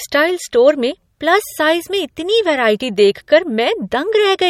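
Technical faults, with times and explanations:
Throughout, MP3 compression: the speech carries a watery, swirling quality, with sibilants turning metallic and chirpy and consonant onsets smeared, and nothing is present above 16.5 kHz. This likely comes from an encoder starved of bits, consistent with a rate around 48 kbps, dropping weak frequency lines that flicker on and off between frames. That flickering, not the fixed treble cut alone, is what sets it apart from simple low-pass filtering.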